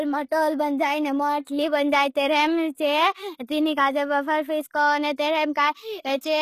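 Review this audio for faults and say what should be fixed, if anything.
The speech was likely squeezed through HE-AAC compression at a rate that sounds near 20 kbps. Only the lower spectrum is coded and the top is rebuilt by copying bands upward, so the treble, which stops near 14.9 kHz, is plainly damaged, with gritty, metallic s sounds. To prevent it, encode at a higher bitrate or use a codec that codes the full band.

A pre-echo occurs from 1.45 to 1.47 s and again at 3.47 s, just before "तीनी काजे बाफर". Each time, the codec spread quantisation noise meant for a loud attack across its whole block, so a short hiss leads the onset and the attack sounds smeared. To prevent it, use shorter transform blocks on transients or allow more bits for the encode.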